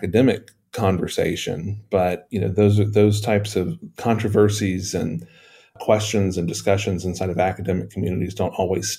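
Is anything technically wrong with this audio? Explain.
No, no technical faults here.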